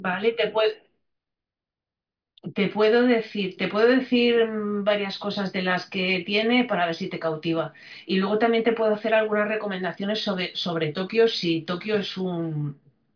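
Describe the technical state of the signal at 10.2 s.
Around 10.2 s the signal is intact, with the speech carried cleanly and no audible fault at that point.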